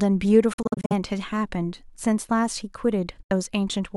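Audio packets were likely arriving at the headphones too late and being discarded, a Bluetooth dropout. Between 0.53 and 0.93 s the speech breaks into a cluster of short silent holes, about 209 ms lost in all across a 370 ms stretch, the longest gap about 46 ms, which fits several lost frames. At 3.22 to 3.31 s a second gap of about 70 ms cuts out. Each hole has hard edges or a fade of a few milliseconds, and the sound resumes further along, as though it had kept playing.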